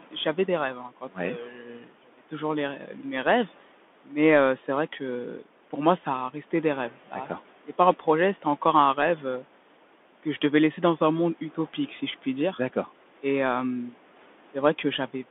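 From the first moment to the end, the speech runs through a Bluetooth CVSD headset codec, and the damage is plainly audible. The band is squeezed to roughly 250 Hz to 3.5 kHz, so everything sounds boxed and thin. The grainy, scratchy texture, which fits CVSD's one-bit 64 kbps stream, sets it apart from an ordinary telephone band-limit. The adaptive step lags on loud, bright sounds and smears sibilants into a rasp, with a fine hiss clinging underneath.

Within the first two and a half seconds, speech is cut by the noise suppressor three times: from 0.0 to 0.26 s (about 11 dB down, only around a tenth of a second actually affected), from 0.74 to 1.17 s (about 12 dB, roughly a third of a second), and from 1.38 to 2.32 s (about 13 dB, some 0.7 s). The suppressor mistakes soft speech for noise and pulls it down along with the room noise, which sits about 23 dB below the speech. Syllable edges and quiet stretches sound swallowed and faint. 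These are partial dips that leave a muffled trace, not the clean silences of dropouts.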